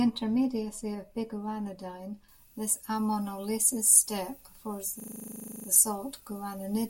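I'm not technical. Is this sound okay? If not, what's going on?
No. From 2.29 s to the end, pre-emphasis left on makes the speech suddenly thin, hissy and over-bright. A treble boost was never undone, unlike a dull or muffled recording.

From 5.0 to 5.68 s, a system hang loop repeats one 40 ms scrap 17 times, a buzz at 25 per second. This is a stuck repeat, not a silent gap.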